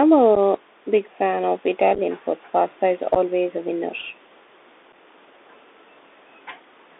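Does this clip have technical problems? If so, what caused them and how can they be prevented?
Yes. The Bluetooth CVSD headset codec runs throughout. The band sits around 300 Hz to 3.6 kHz, with a granular hiss, scratchy s sounds and distortion where the one-bit step can't keep up, which fits a 64 kbps CVSD link. Use a wideband-capable headset (mSBC or better) so the link doesn't fall back to CVSD.

There is also unconcealed Bluetooth headset packet loss at 0.35 s, 1.95 to 1.99 s (scattered holes), 3.15 to 3.17 s and 4.92 s. Each time a few packets drop, leaving abrupt gaps. Keep the headset close to the phone with a clear line of sight and away from 2.4 GHz clutter to cut the dropouts.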